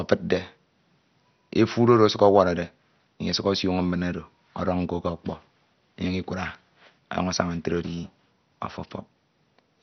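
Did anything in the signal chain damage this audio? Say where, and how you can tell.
Yes. MP2 compression runs throughout the speech, likely at the codec stage. Nothing survives above about 6.2 kHz, and there is a gurgling, granular roughness. Too few bits switch off the upper sub-bands and coarsely quantise the rest, which points to a low bitrate near 48 kbps.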